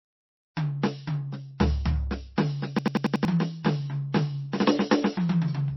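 From the very start the music sounds watery and swirly, with nothing above about 5.8 kHz. That's the signature of MP3 compression, likely from an encoder starved of bits, around 24 kbps by the sound of it. It cut the treble at a fixed point and dropped weaker frequency lines that flicker in and out from frame to frame. Attacks come out smeared, and the damage is plainly audible the whole way through.

At 2.79 s a system hang loop kicks in and runs to 3.25 s. The computer or driver froze while the sound hardware kept replaying the same chunk of its ring buffer. A piece about 92.9 ms long, which fits a 4096-sample buffer, repeats five times at about 10.8 Hz. You hear it as a machine-gun stutter, and around half a second of the real music is lost underneath it.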